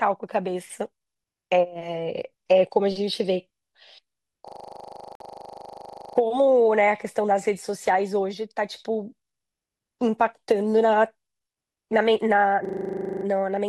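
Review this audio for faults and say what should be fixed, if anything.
From 4.48 to 6.17 s and again from 12.65 to 13.25 s there's a system hang loop. One 40 ms slice repeats over and over as a rattly 25 Hz buzz, because the system froze while the hardware kept replaying its buffer. Chase down whatever is stalling the audio driver.

Inside that first loop, from 5.15 to 5.20 s, the sound drops out for about 51 ms, likely a Bluetooth stall where interference held up packets and the headphone buffer ran dry. Keep the phone closer or avoid crowded 2.4 GHz channels.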